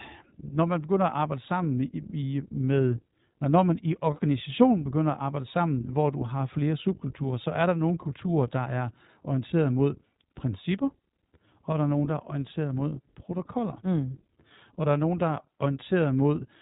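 From start to end, the speech carries iLBC codec damage. Nothing passes above 3.8 kHz, and the voice sounds rough and synthetic, consistent with 20 ms frames at 15.2 kbps.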